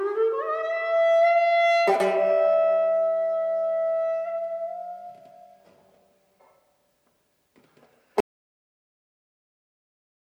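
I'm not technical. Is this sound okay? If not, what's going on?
No. There is an audio dropout to silence starting at 8.20 s and running until the very end, about 2.1 seconds in all. The sound stops abruptly mid-flow and is replaced by complete, dead silence, without even the faint background hum a quiet room leaves. The likely cause is that the input was lost, for example a cable or device disconnecting or something muting it, while the recording carried on capturing nothing. Whatever happened in that stretch is gone.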